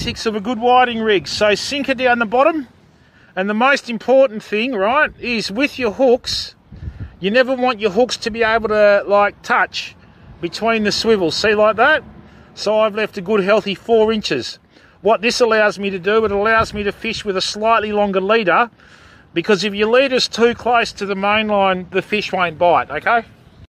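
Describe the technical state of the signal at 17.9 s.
At 17.9 s the signal is intact, with no dropout, distortion, glitch or other audible fault at that point.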